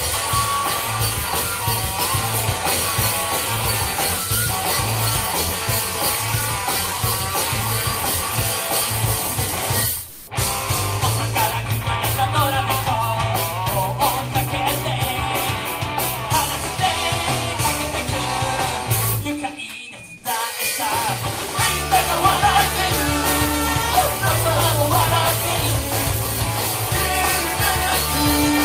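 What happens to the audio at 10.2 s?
From 10.09 to 10.27 s, comfort noise replaces the background. The sender likely paused under Opus DTX. The receiver fills the gap with steady, featureless noise, about 4 dB off level.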